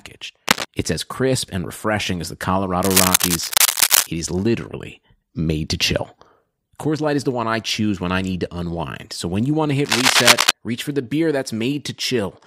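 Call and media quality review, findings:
Cable scratch noise: ragged scratchy bursts louder than the speech at 0.47–0.65 s, 2.83–4.07 s after "and refreshing as the", and 9.85–10.51 s before "reach for the beer". Likely a worn cable or connector whose contact resistance jumps as it moves.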